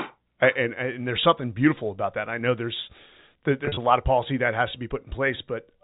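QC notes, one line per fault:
3.65–3.77 s, packet loss with pitch repetition: about 80 ms of speech lost in runs up to 40 ms, filled by repeated pitch periods. The result is a briefly held, buzzy tone just before "lot of policy that". On a spectrogram this shows as flat, repeating harmonic stripes; on the waveform, identical cycles that taper.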